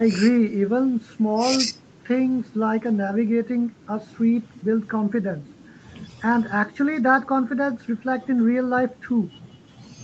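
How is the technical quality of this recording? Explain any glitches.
Nothing here counts as a glitch: the speech sounds like an ordinary call recording, with the top end rolling off around 8 kHz as you'd expect from the call's Opus codec.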